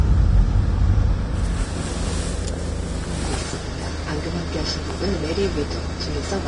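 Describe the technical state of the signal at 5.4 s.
At 5.4 s, as across the whole clip, the sound is hissy and grainy, with no content above 10.6 kHz. Likely Vorbis compression at a low bitrate, around 32 kbps, coarsely quantising treble detail into noise.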